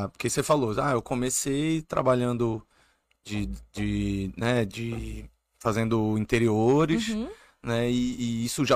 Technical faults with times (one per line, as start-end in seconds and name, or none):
none